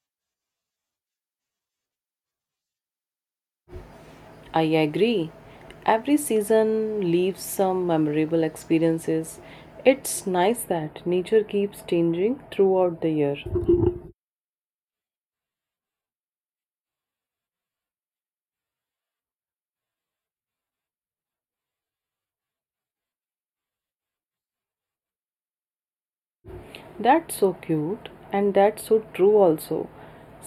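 From 10.56 s to the end, channel delay causes comb filtering: one channel lags by a few samples, cancelling near 7 kHz. The spectrogram shows a dark notch band; the speech sounds hollow and phasey.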